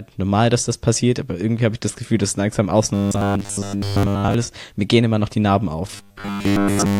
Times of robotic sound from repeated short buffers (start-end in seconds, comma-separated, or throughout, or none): 2.94-4.34, 5.91-6.99